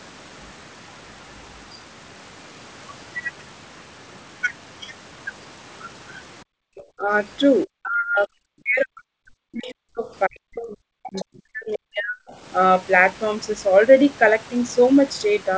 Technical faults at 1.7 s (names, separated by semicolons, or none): none